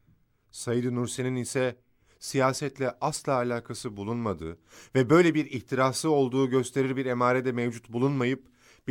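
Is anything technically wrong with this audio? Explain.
No, nothing technically wrong is audible anywhere in this speech recording.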